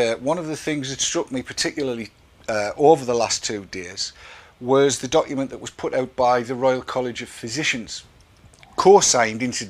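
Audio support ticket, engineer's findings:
Short glitch at 1.77 s, lasting roughly a hundredth of a second. Damaged data in the compressed stream: corrupted bytes at that point make the decoder misread the affected frame and lose sync, then resume at the next valid frame header.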